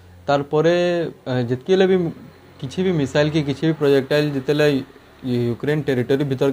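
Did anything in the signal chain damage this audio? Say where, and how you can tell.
Yes. Sample clock jitter sets in at 3.82 s and runs to the end of the clip, pointing to the converter stage. From that moment a fine hiss and roughness ride on top of the sound, thickest where it is loudest and brightest and gone in the quiet gaps. An unsteady sampling clock, wandering by something like 7 microseconds, captures each sample slightly early or late. Fast-changing waveforms turn that timing error into an amplitude error roughly 30 dB below the signal.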